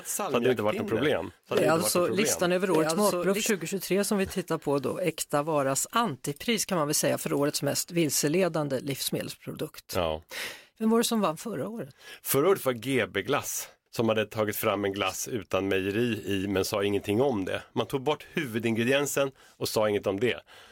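A doubled audio track runs from the very start to 3.5 s, ending abruptly just before "som vi tittar på". A second, full-band copy of the speech trails about a second behind, roughly 5 dB quieter, with no room colour. It is likely a second capture path or an edit holding two out-of-step copies.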